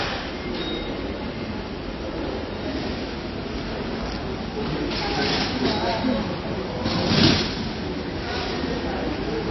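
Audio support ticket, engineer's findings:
Throughout: watery, swirly sound, smeared attacks, nothing above 5.8 kHz; likely MP3 compression near 24 kbps. Spectrogram shows a hard ceiling and flickering holes where weak bins drop out.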